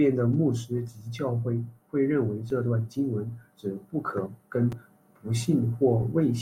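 Repeated buffer at 2.50 s, after "教会认为", and 4.72 s, after "文指不可": a late delivery made this speech clip replay its last 5.3 ms block once, giving brief clicks that fit a 256-sample buffer.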